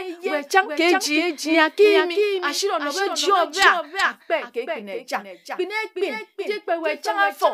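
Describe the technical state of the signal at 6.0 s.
At 6.0 s the speech carries a doubled audio track, present across the whole clip. A second full-band copy trails by about 0.4 s, roughly 5 dB quieter, with no reverberant tail. It was likely captured again through a slower path.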